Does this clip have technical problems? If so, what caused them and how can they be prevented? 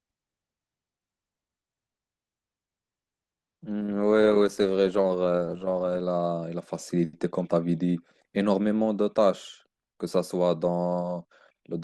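Yes. For the first 6.0 s, from 0.0 s, the speech is dull and smeared, with missing or synthetic-sounding treble and stronger codec artefacts. At 6.0 s the quality jumps up with no gap. This is an adaptive stream starting at a low bitrate: the player opened on a low-bitrate rendition so playback could begin quickly, and switched to a higher one once it had measured the connection. The sound fits Opus at about 16 kbit/s stepping up to 64 kbit/s. Prevent it by having the player start on a mid or higher rendition, or by buffering briefly before starting playback.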